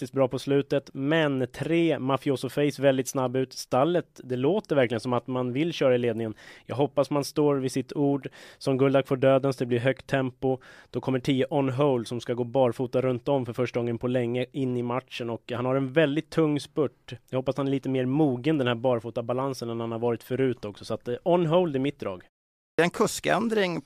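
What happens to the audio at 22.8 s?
Right around there you get a clipped start after a pause. After "hold i mitt drag" and a 0.35 s gap, the output device seems to doze off, and its wake-up swallows about 225 ms, from 22.56 to 22.79 s. The next word bursts in abruptly, missing its opening sounds.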